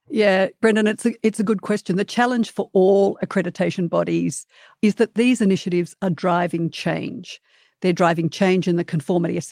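Nothing goes wrong anywhere in this bit of speech, so there's no technical fault to point out at any moment.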